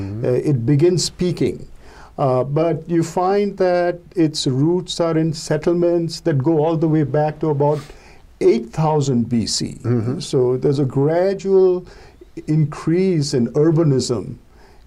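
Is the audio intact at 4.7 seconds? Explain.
Yes, the audio at 4.7 seconds is intact, with no dropout, click, distortion or other fault at that moment.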